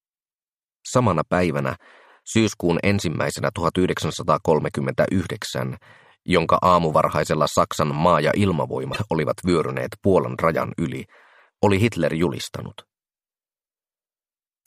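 At 8.92 to 8.97 s the audio breaks into a short glitch of roughly 45 ms, the mark of damaged data in a compressed stream. A stretch of the encoded bytes was corrupted, so the decoder misread those frames, lost its place and had to search for the next valid frame header before it could resume. On a spectrogram this shows as a narrow vertical block that doesn't continue the surrounding spectral pattern. In the waveform it looks like a brief, abrupt break in the signal.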